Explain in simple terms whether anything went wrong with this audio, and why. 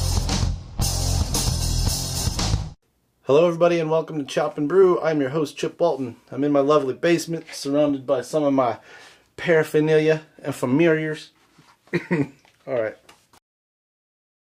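Clock drift between sender and receiver runs through the whole clip. The device that sent this audio kept time with its own clock, and that clock ran about four percent faster than the receiving device's. Audio therefore arrived slightly faster than it could be played out. The waiting area that smooths out delivery kept overfilling, and the receiver had to keep stepping in to get rid of the surplus sound.

Repeated timing corrections run from 2.75 s to 14.47 s. Throughout that stretch the receiver kept trimming away short slivers of sound to catch up with the faster sender, so the audio moves along at about 106% of its natural pace. The cuts are small and fall at irregular moments, always in the same direction.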